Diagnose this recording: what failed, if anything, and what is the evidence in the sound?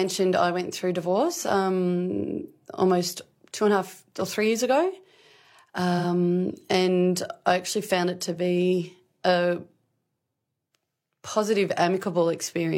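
Codec: AAC frame loss with concealment at 5.98–6.05 s. The decoder rebuilt this 43 ms gap, which fits one lost frame, from the previous spectrum. A spectrogram shows it as a smeared, blurred patch.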